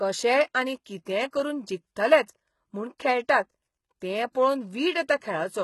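The speech was most likely passed through HE-AAC compression from start to finish, at a heavy setting consistent with a bitrate around 16 kbps. The codec kept only the lower spectrum and rebuilt the treble by copying lower bands upward under a coarse envelope, so the top end up to 20.4 kHz sounds synthetic. Its harmonics don't line up with those below, and s sounds come across gritty, metallic or lispy throughout.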